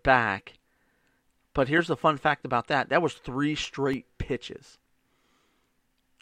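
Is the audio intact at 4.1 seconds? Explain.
No. At 4.1 seconds the speech sits inside a run of CD scratch ticks from 3.35 to 4.81 s. A blemish on the disc surface corrupts more data than the error correction can rebuild on each rotation, so the player interpolates or mutes the damaged samples. Six ticks occur across that span, about four per second, each a very brief click or gap, the longest about 1.5 ms.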